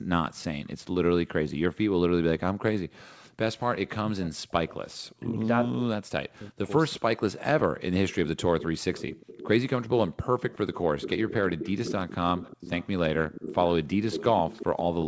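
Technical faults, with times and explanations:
2.92–3.31 s, 4.86–5.15 s and 6.95–7.00 s, echo leak. A faint delayed copy of the speech trails the original by 358 ms. It is very quiet in the first two spots and clearly stronger at 6.95 s. The likely cause is a loudspeaker on the far side whose echo canceller let part of the returned sound through.
3.98–7.03 s, speech suppressed in double talk. The near speech dips sharply, at worst by around 40 dB. About two seconds in this stretch are affected, in pieces. Syllables fade or vanish while the other side is active. This likely comes from the echo canceller turning the line down because it could not tell this talker from the loudspeaker echo when both sides spoke at once.
8.09 s to the end, echo leak. The 358 ms delayed copy returns and stays for the rest of the clip. It is much louder here, only about 10 dB under the speech.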